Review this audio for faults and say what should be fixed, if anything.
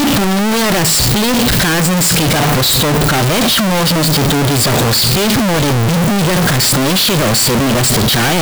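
The whole clip is buried in loud, harsh distortion, and even the pauses between phrases come through at full level. This points to a likely signed and unsigned mix-up in the 16-bit samples: with the top bit flipped, every zero crossing turns into a full-scale jump. The waveform looks like a solid block, and the spectrogram shows dense energy across all frequencies. To prevent it, declare the sample format explicitly at every read and write stage.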